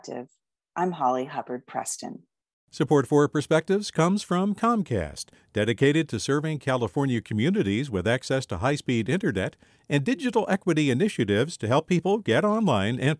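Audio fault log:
No faults detected in this clip.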